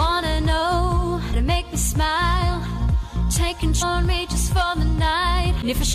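Damaged data in a compressed stream shows up at 1.33 s, 3.81 to 3.83 s, and 5.62 s. Each time, corrupted bytes make the decoder misread frames and lose sync until it finds the next valid header, leaving a brief chirp or blip lasting roughly 20 ms.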